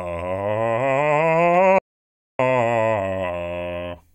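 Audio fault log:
1.79–2.39 s, audio dropout to silence: the music stops abruptly and about 0.61 s of silence follows, with no room tone or decay underneath. Playback then resumes mid-flow. Whatever was playing in that gap is simply missing. The cause is likely a lost input, such as a dropped connection or a momentary mute, while recording carried on writing silence.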